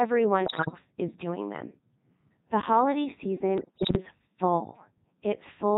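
A speech clip, heavily damaged by the Codec 2 vocoder throughout. The voice sounds robotic and buzzy. It is rebuilt from sine waves using only pitch, voicing, level and a spectral envelope, so the original waveform is gone. The sound fits the 3.2 kbit/s mode. Bit errors on digital voice radio strike twice, from 0.46 to 0.78 s, just before "is doing them", and from 3.58 to 3.97 s. Flipped bits corrupt whole frames. Pitch, level and tone jump, and the voice breaks into warbles and gibberish. The damage points to a bit error rate of several percent, worse in the second burst.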